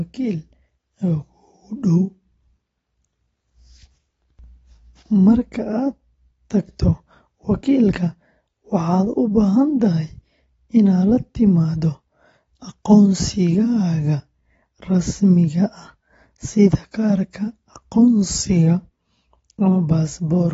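Throughout, nothing sounds above 7.6 kHz, and sibilants warble and fizz, unlike a clean low-pass filter. This points to AAC compression, likely at around 24 kbps.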